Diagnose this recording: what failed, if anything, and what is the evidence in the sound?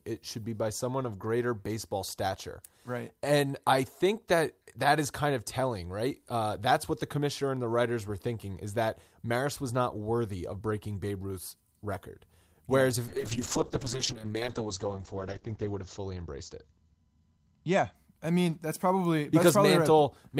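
From 13.09 to 18.01 s the speech loses everything above 8 kHz and turns coarser, holding its worst for 2.41 s before clearing ahead of "I mean that's probably". This is a call bitrate drop at the codec, consistent with the encoder falling from 40 to 8 kbps.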